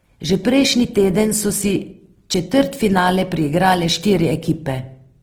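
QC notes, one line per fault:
throughout, Opus compression. The speech sounds rough and grainy, with a noisy texture laid over its tonal parts. Damage is plainly audible across the whole clip. There is less swirling than MP3 and few obvious holes, because the band energies are kept and thin bands are filled with folded or noisy content. The top end is not cut, and the sound reaches about 20.2 kHz. The likely cause is Opus in its music mode at a low rate, which fits roughly 16 kbps.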